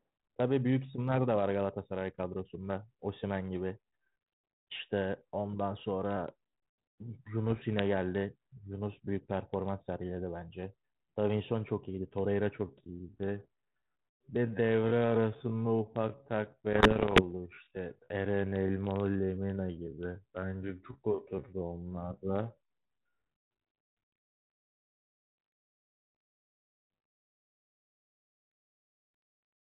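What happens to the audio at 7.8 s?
Bit errors on an ADPCM link run from 7.50 to 7.79 s, ending right at 7.8 s. Flipped bits, well under one percent of them, corrupt the difference codes the G.726 decoder receives at 32 kbit/s. Each bad code also throws off the decoder's adaptive step size and predictor, so the damage lingers for some milliseconds instead of staying a single click. The speech breaks into pops and rough, gritty bursts with brief jumps in level.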